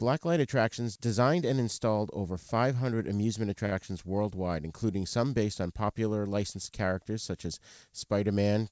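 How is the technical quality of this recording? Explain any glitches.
The speech comes through a call codec with nothing above 8 kHz, which fits G.722, and there's one glitch. At 3.66 to 3.73 s there's a short stall from a late packet: the jitter buffer ran dry, so the receiver stretched the last sound for about 59 ms until the packet showed up, then carried on from the same spot. Nothing is lost, but that sound hangs on a beat too long with a faint buzzy dip.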